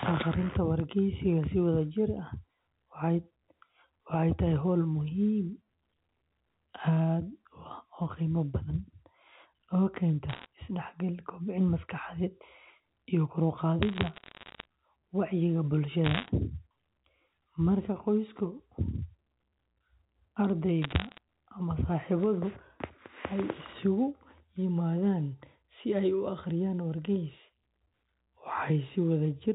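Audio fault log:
10.30–10.46 s, 13.83–14.65 s (just after "iyo kor u"), 16.04–16.29 s, 20.82–21.18 s: bit errors on a digital phone line. Short bursts of sharp ticks and crackle sit over otherwise unchanged speech. Roughly one bit in a hundred to two hundred was flipped on the 8 kHz A-law telephone line. Each hit corrupts a single sample, and flips on the sign or high bits jump the waveform, which causes the clicks.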